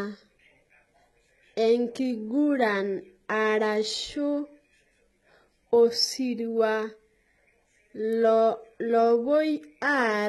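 Right from the start the speech has that smeared, synthetic treble you get from HE-AAC compression, and it runs the whole way through. The top end sounds bright enough, but it isn't real detail: the upper bands are likely being rebuilt from copies of the lower spectrum, so the harmonics up there don't line up and the s sounds come out gritty and lispy. The damage is heavy, which fits a very low bitrate of around 16 kbps, and there's nothing at all above about 11.8 kHz.

Then at 8.12 s there's a sharp snap laid over the speech, only a few milliseconds long. That's an electrical switching spike: a nearby switch, motor or static discharge likely arced and the audio line picked it up as a brief click sitting on top of the sound.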